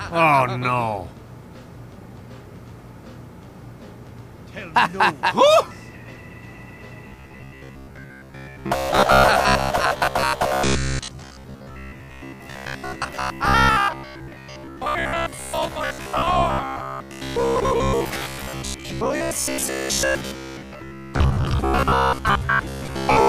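Robotic sound from repeated short buffers runs from 7.08 s to the end of the clip at 23.28 s. From that point the sound takes on a rigid, metallic buzz fixed at 66.7 Hz. That buzz is most likely caused by new audio arriving too slowly: the playback fills each gap by looping the last 15 ms fragment, and that period sets the pitch. Most of the material after 7.08 s is replaced by these repeats, so the real audio only faintly shapes the buzz.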